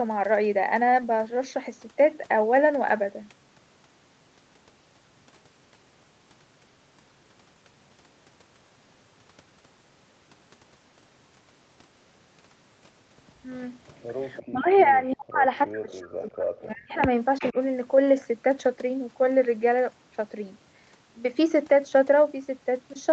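Around 13.87 to 14.03 s and again at 14.36 to 14.45 s there's echo leak: a faint, then somewhat stronger, copy of the speech coming back roughly a third of a second late, at about 337 ms. It's likely the far end's loudspeaker feeding its mic past an echo canceller that didn't catch it all. Right after, from 14.47 to 15.45 s and 15.66 to 17.03 s, you get speech suppressed in double talk: the talker keeps dropping out in chunks, as much as around 40 dB down, likely because the canceller couldn't tell them apart from the echo while both were active and ducked everything. Another echo scrap slips through at 15.90 to 15.94 s, delayed about 353 ms, then a louder one at 17.39 to 17.52 s, followed by a brief, shallower dip of roughly 15 dB from 17.52 to 17.57 s.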